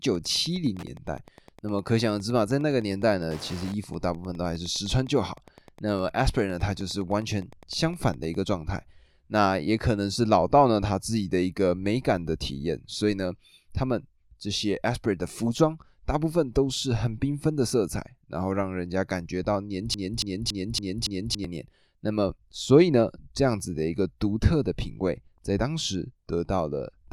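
Wi-Fi interference runs from 0.0 to 8.36 s. A nearby Wi-Fi radio's transmissions are being picked up and rectified by the audio circuitry, so its beacon, sent every 102.4 ms, becomes a steady ticking just under ten times a second. It sits about 25 dB below the speech, a faint, regular click track underneath the talking that stops at 8.36 s.

A broken-record loop occupies 19.94 to 21.44 s. A 281 ms fragment plays five times back to back, each pass identical, giving a stuttering, mechanical repetition instead of continuing speech. The likely cause is a stall in the player, encoder or stream, which kept re-sending the last chunk it held. Whatever should have been heard during those 1.5 seconds is gone, and the speech resumes after the gap.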